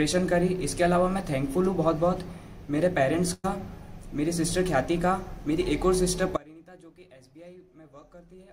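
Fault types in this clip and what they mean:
Burst of packet loss: At 3.33 to 3.46 s, roughly 100 ms of audio never arrived in time. The receiver stretched the last sound and let it fade across the hole, then resumed further on, so that stretch is skipped rather than silent.
Audio dropout to a faint residue: From 6.37 s to the end the sound cuts out abruptly, leaving only faint sound about 25 dB below its normal level. This is likely the signal being lost while the path after the break stayed live.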